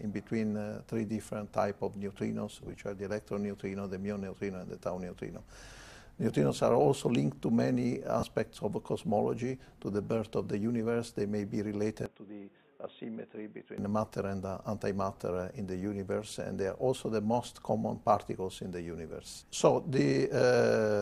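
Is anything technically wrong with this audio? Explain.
Yes, there are two kinds of problem here.

Lost LE Audio frames show up at 2.61 to 2.77 s, 8.20 to 8.23 s and 19.10 s. About 80 ms goes missing in short bursts spread over 160 ms, then 30 ms, then 10 ms. The LC3 decoder papers over each gap by reusing the last spectrum with scrambled signs, so you hear brief noisy smears of the preceding sound.

From 12.06 to 13.78 s the sound suddenly turns dull, with nothing above 3.8 kHz. It drops about 10 dB in level and picks up a new noise floor roughly 35 dB down. It then clears up again, with no gap at either switch. That's most likely the input switched to a poorer device, a narrower-band mic with its own level and noise.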